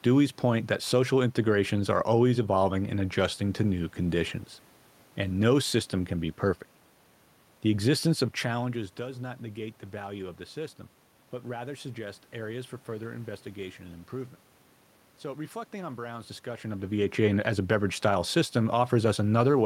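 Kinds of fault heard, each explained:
Nothing here counts as a system fault; the room background and the couple of spots where the talker drifts nearer or farther from the mic, once around the middle and again near the end, are just part of how it was recorded.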